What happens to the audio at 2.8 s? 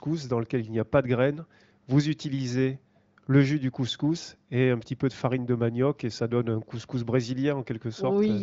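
Nothing goes wrong at 2.8 s: the speech there comes through intact, carried by the AMR wideband (HD Voice) codec at a high rate, with nothing above about 7.6 kHz.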